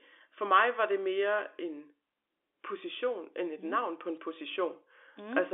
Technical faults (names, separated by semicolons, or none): bit errors on a digital phone line